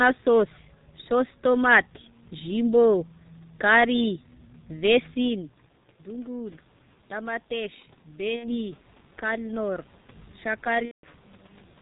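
Throughout, the speech passes through a G.723.1 codec at 6.3 kbit/s. Its narrow band and slow voice model leave the voice heavily muffled and hoarse, with smeared consonants.

VoIP packet loss concealed by the speech codec occurs twice. From 8.36 to 8.63 s, about 60 ms of audio goes missing, which fits two lost 30 ms frames. From 10.85 to 11.07 s, about 180 ms goes missing, which fits six frames. Each time the decoder stretches the last sound into a fading buzzy tone or coloured noise, and the voice stays weak briefly afterward.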